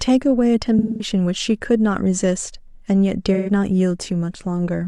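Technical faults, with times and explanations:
0.79–1.10 s, AAC frame loss with concealment: about 213 ms of the stream is missing, which fits a run of five lost frames. The decoder covers the gap by reusing the last good spectrum with its phase scrambled, so the speech turns smeared and noisy here.
3.34–3.50 s, AAC frame loss with concealment: a shorter gap of about 128 ms, which points to three lost frames. The decoder fills it the same way from the preceding spectrum, giving a briefer phasey, blurred patch.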